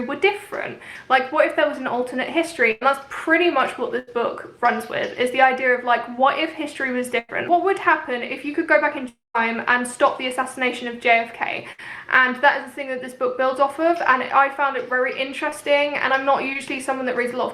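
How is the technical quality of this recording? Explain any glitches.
The recording has network glitches: four bursts of packet loss, one longer dropout and two brief concealed losses.

Burst of packet loss at 2.71–2.83, 3.99–4.09, 7.19–7.31 and 11.72–11.82 s: runs of packets, 60 to 100 ms each, failed to arrive in time. The receiver stretched the last sound into a fading buzz or hiss, then resumed with that stretch skipped.

At 9.09–9.36 s, likely a long network dropout: about 260 ms of audio is missing. The last sound is carried on briefly and fades, leaving roughly 180 ms of near-silence before the sound picks up further along.

Short concealed packet loss at 15.50–15.53 and 16.53–16.57 s: about 20 ms each never reached the decoder. The decoder extrapolated from the preceding sound and blended back, heard as a quick smear or wobble.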